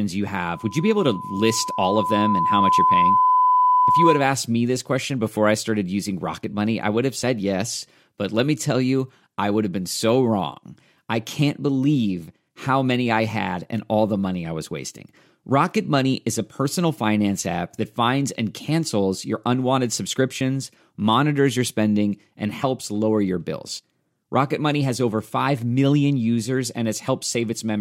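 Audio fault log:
0.33–4.36 s, loudspeaker feedback squeal: a single 1 kHz tone swells over about three seconds to sit a few dB above the speech, because the microphone picks up its own loudspeaker and loop gain exceeds one there. It ends just before "me this question before".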